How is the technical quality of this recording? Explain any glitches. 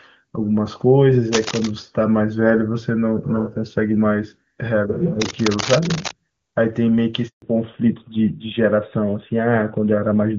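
The recording has three distinct glitches: two bursts of scratching, a brief dropout, and a lasting loss of brightness near the end.

Between 1.33 and 1.71 s, and again from 5.21 to 6.12 s, a dense, uneven rustling sits over the speech, nearly as loud as the voice itself. This is cable scratch noise. Its likely cause is a worn cable, connector or control being moved. As it shifts, its contact resistance jumps about rapidly and injects these ragged noise bursts into the signal.

At 7.28 s the voice fades out within a few tens of milliseconds and the line goes silent for 140 ms, until 7.42 s. This is a handover gap. The phone switched the call between networks, and no speech frames arrived during the changeover. Whatever was said in that stretch is simply gone rather than muffled.

From 7.42 s to the end, the speech sounds duller and rougher, with nothing left above 4 kHz. This is a fallback to narrowband. 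Before the gap, the audio has the fuller top end of the AMR wideband (HD Voice) codec, at what sounds like one of its higher rates and with little or no audible coding damage. After the handover, the sound points to the older AMR narrowband codec, which discards everything above 4 kHz.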